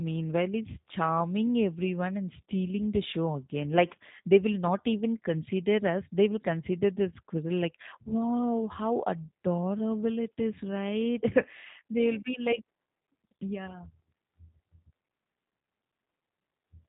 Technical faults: G.729 codec

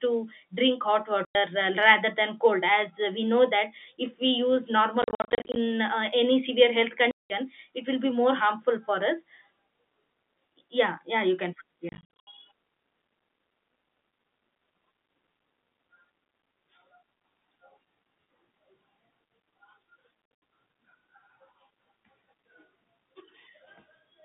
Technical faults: packet loss filled with silence

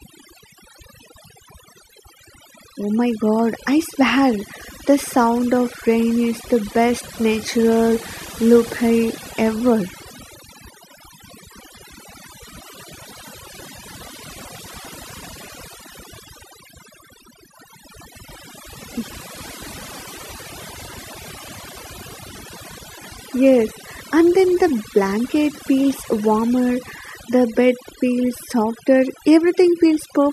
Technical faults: overdone noise removal

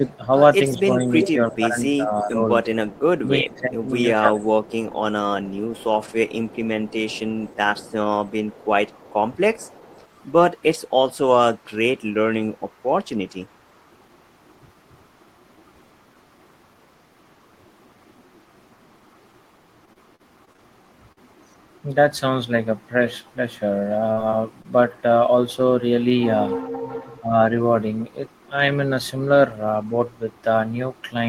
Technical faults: speech suppressed in double talk; echo leak; repeated packet loss (robotic sound); burst of packet loss; short concealed packet loss

